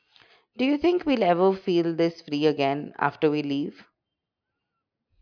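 Nothing in this bit of speech trips the ear as a technical fault, so there's simply nothing to flag here.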